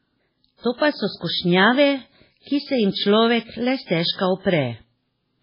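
Throughout the speech, the sound is dull and watery, with nothing above about 5.3 kHz and swirly, chirping artefacts on s sounds. This is likely heavy MP3 compression at a very low bitrate, which fits around 16 kbps: the encoder cut the treble and dropped weak frequency lines frame by frame.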